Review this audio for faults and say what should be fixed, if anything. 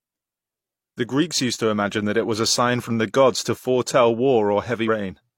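At 4.84 to 4.89 s the speech jumps ahead because compressed frames are skipped: about two frames, roughly a tenth of a second, which fits frames of about 43 ms. On a spectrogram, harmonics break off and resume slightly misaligned at a vertical seam, and the waveform envelope steps abruptly. Verify file integrity and use reliable, error-protected delivery so that no frames go missing or get rejected as damaged.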